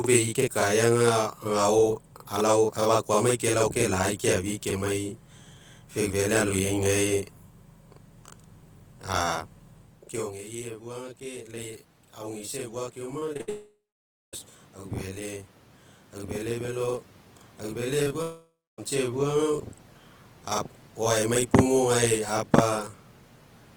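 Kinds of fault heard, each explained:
Channel delay (doubling): one channel runs about 43 ms late, which fits a 2048-sample buffer, so the mono mix carries a constant slapback double on the speech.
Automatic gain rising: after the talker drops away around 10 s, the gain control climbs about 8 dB through 14.5 s, lifting voice and room noise together.
Repeated packet loss (robotic sound): from 13.19 to 13.49 s, four quick holes get patched back to back, so the speech turns choppy.
Long network dropout: from 13.49 to 14.35 s and 18.22 to 18.80 s, the sound smears into a fading buzz, then goes quiet, likely a network outage.
Short concealed packet loss: right after "aufele velo aufele", at 18.03 and 18.08 s, two tiny gaps are filled in, heard as a brief smear.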